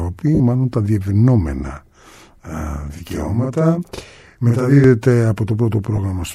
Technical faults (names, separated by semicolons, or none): lost LE Audio frames; channel delay (doubling)